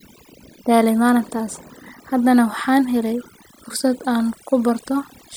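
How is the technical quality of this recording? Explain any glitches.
Overdone noise removal runs throughout the speech. The noise reduction was set so aggressively that any frequency band near its noise estimate gets pulled almost to nothing, taking quieter parts of the voice along. Pauses sink to near silence with twinkling specks.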